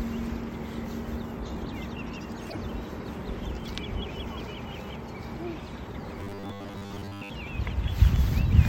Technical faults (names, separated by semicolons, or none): damaged data in a compressed stream; robotic sound from repeated short buffers